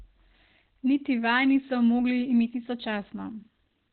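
From start to finish, the speech carries heavy Opus compression damage, likely from a low-rate encoder. Nothing is heard above 4.2 kHz. The top of the spectrum is simply gone, so consonants lose their edge and the sound turns muffled and hoarse. That narrow band points to the codec's SILK speech mode at a very low rate, near 12 kbps. At that rate detail is traded away, and what remains sounds thin and hoarse throughout.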